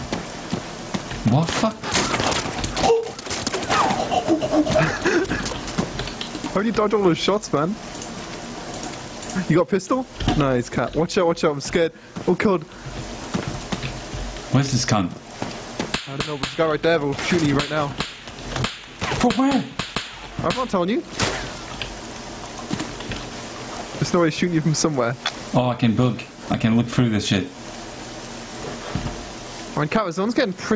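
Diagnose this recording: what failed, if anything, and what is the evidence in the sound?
What failed is gain pumping, and it runs the whole length of the clip. The gain swings by something like 20 dB. Loud and soft passages sit squashed together. The likely cause is input gain cranked far too high at the mic front end, with a fast limiter or compressor yanking it back down on every peak. The call processing's top end stopping near 8 kHz is normal.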